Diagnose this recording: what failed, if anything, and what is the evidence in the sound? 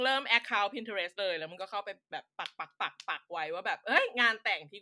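Nothing failed, and the sound gives no evidence of a fault at any stage of the recording.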